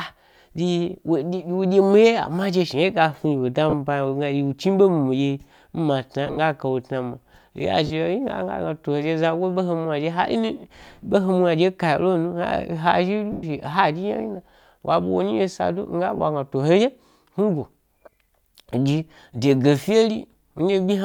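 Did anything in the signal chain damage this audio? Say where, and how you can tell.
Yes. Lost LE Audio frames at the Bluetooth link: brief noisy smears at 3.70–3.73, 6.27–6.37 (scattered, longest run about 50 ms), 7.87–7.90, 13.32–13.43 and 16.17–16.20 s, consistent with 10 ms frames. The LC3 decoder repeated the last spectrum with randomised signs, so spectrograms show harmonics blurring into broadband noise that fades.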